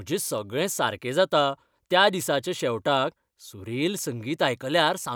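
A wireless microphone noise hit occurs from 2.20 to 2.25 s, between "सगळें सारकें जाता त्या" and "शेवटाक सुरेल". The radio link from the analogue FM microphone briefly faded as reflected signals cancelled at the receiver, so the receiver's own noise rose above the weakened carrier. For about 50 ms this comes through as a quick swish of static laid over the speech before the signal recovers.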